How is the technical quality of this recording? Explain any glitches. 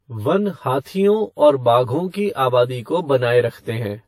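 The recording has two faults that last throughout: a hollow, comb-filtered tone and compressed-sounding artefacts with a band limit.

Channel delay (comb filtering) runs through the whole clip. One channel arrives roughly 10 ms after the other, and when the two are summed to mono, energy common to both cancels at evenly spaced frequencies. The first notch sits around 50 Hz, with further notches every 100 Hz or so above it. That fixed pattern of gaps gives the speech a hollow, phasey colour that never changes.

Transcoding between lossy codecs also affects the entire clip. Nothing is present above 16.5 kHz, so the top of the band is cut off, with the artefacts of the different codecs heard together. The likely cause is a chain of two lossy encoders, a low-rate WMA encode followed by AAC-LC. The second encoder spends bits reproducing the first one's damage, adds its own, and keeps the lowest cut-off in the chain.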